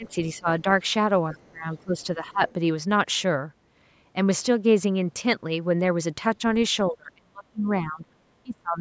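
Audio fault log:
0.0–0.65 s, 1.33–2.41 s, 6.91–8.05 s, 8.43–8.8 s: speech suppressed in double talk. The talker's level dips sharply, by roughly 15 to 35 dB at the deepest, worst near 7 to 8 s. This is likely an echo canceller that could not separate near-end speech from far-end echo and attenuated both.
1.33–1.51 s, 2.00–2.05 s, 2.48–2.53 s: other side's voice leaking through. Faint scraps of a second voice sit about 30 to 35 dB below the talker. The likely cause is loudspeaker playback reaching the microphone that the canceller did not fully remove.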